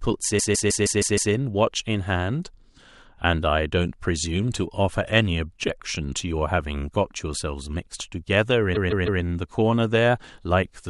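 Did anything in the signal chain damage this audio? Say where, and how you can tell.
Yes, at the codec or storage stage: repeated frames. From 0.38 to 1.32 s the same 156.7 ms block plays six extra times, adding about 0.94 s. From 8.74 to 9.21 s it recurs with three extra plays, adding 0.47 s. The block length fits a run of roughly six compressed frames being written or sent again, so the decoder replays identical speech. Unlike a buffer underrun, there is no gap or dropout between repeats.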